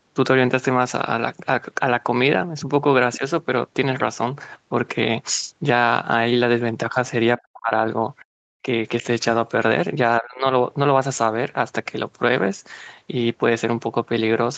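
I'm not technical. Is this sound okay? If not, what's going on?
No. This is a speech recording from a call where the phone or computer's echo canceller, the part that stops the other person's voice from coming back through the microphone, struggled several times.

Other side's voice leaking through: The device was likely playing the other caller through its loudspeaker, and the echo canceller didn't fully remove that sound before sending the microphone signal on. From 3.13 to 3.17 s, a faint scrap of a second voice slips in underneath the speaker. It is quiet and very brief, just a momentary trace of someone else.

Speech suppressed in double talk: When both people talked at once, the echo canceller likely couldn't tell the speaker apart from the loudspeaker echo, so it turned everything down together. The speaker's voice dips slightly from 3.17 to 3.22 s and again from 8.62 to 8.67 s, and drops more noticeably from 10.19 to 10.46 s. 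From 7.38 to 7.72 s it almost vanishes for about a third of a second.

Background gated by the echo canceller: While the loudspeaker was playing, the echo canceller clamped the microphone down hard to keep echo out. From 8.24 to 8.34 s, the room sound behind the speaker suddenly drops to near silence for about a tenth of a second. It then comes straight back once the canceller lets go, which makes a small, abrupt hole in the background.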